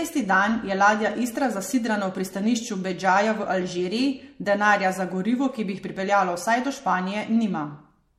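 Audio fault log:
Throughout: generation loss, most likely from the speech going through MP3 at 64 kbit/s around four times over. Nothing comes through above about 16.4 kHz, and the top end has that swirly, watery quality with hollow gaps in the spectrum. Consonant attacks come out soft and smeared. Every re-encode quantises again on a frame grid that doesn't line up with the previous pass, so the noise and dropouts pile up past what one 64 kbit/s pass would do.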